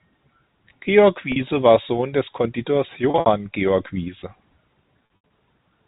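Packet loss with pitch repetition occurs at 1.32 s (40 ms), 3.10 to 3.26 s and 5.16 to 5.29 s. The receiver loops the last pitch period, producing a held, buzzy tone instead of a click or bare gap. The 60 and 80 ms runs fade toward silence. This is all heard through 4 kHz-limited G.711 telephone coding.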